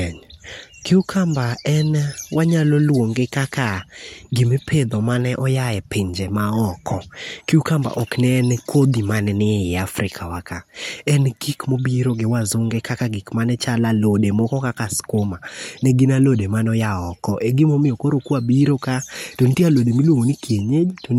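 A speech recording, and nothing technically wrong turns up anywhere in it, so there are no times or causes to report.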